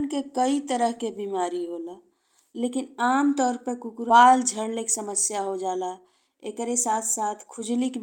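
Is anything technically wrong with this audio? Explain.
Yes, the speech has two faults, both in the second half.

At 4.09 to 4.11 s there is a skip ahead. Roughly a second of audio is missing: it was discarded while later audio was already queued, so playback leaps forward with no gap filled in. The sound cuts abruptly from one point in the speech to a much later one. On a waveform the join shows as a sudden change in envelope, and on a spectrogram the harmonics and formants break off and resume at different frequencies with nothing between.

From 4.19 to 6.75 s there is a jitter buffer speed-up. After the jump, the buffer still held more audio than it aimed for, so the receiver removed many short pitch-period pieces to shrink the delay, around 200 ms in total. The speech runs at about 107% speed at unchanged pitch, sounding slightly rushed. On a spectrogram, harmonic spacing stays the same while syllables are compressed in time. 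The waveform may show small discontinuities in periodic segments where pieces were cut.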